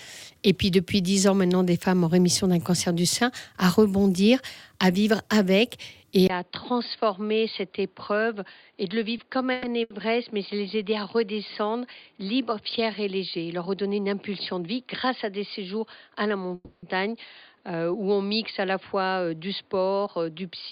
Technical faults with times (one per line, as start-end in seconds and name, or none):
6.27-20.72 input switched to a poorer device
9.52-9.65 call audio freeze
9.83-9.92 short stall from a late packet
13.37-14.62 jitter buffer speed-up
16.55-16.85 call audio freeze
20.20-20.52 jitter buffer speed-up